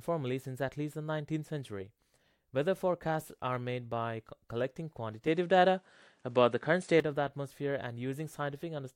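At 5.27 s the speech abruptly loses its top end and stays that way until 7.00 s. Nothing comes through above about 10.1 kHz, the level shifts by a few decibels, and a faint new noise floor sits well below the speech. There's no gap at the switch; the tone just changes. It sounds like the input switched to a poorer device before switching back.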